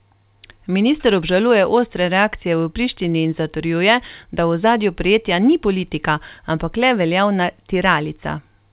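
No technical faults can be heard anywhere in this speech recording. It came through a call path whose sound fits G.711 mu-law telephone coding at 64 kbps, with nothing above 4 kHz.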